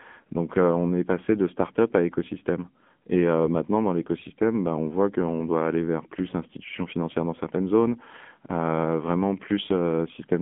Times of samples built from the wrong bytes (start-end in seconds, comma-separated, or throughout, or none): none